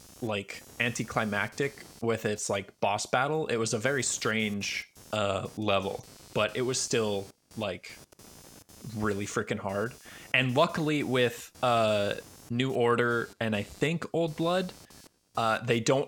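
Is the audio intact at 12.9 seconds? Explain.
No, at 12.9 seconds computer activity noise runs under the speech, as throughout: a buzz pulsing near 200 Hz, roughly 25 dB below, from load changes disturbing the shared audio ground.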